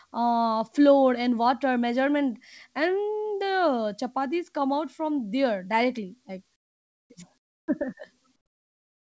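In the pauses at 6.56–7.10 s, 7.38–7.68 s and 8.36 s to the end, the background drops about 24, 9 and 20 dB to a flat, featureless hiss, likely comfort noise in place of the background, synthesised by the receiver while discontinuous transmission halted sending.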